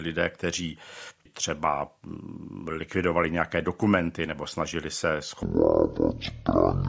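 From 5.43 to 6.88 s a wrong sample rate plays the samples at half speed with no conversion. Tempo drops to 0.5x and pitch falls 12 semitones, one octave, so speech turns slow and deep. This fits 32 kHz audio played at 16 kHz.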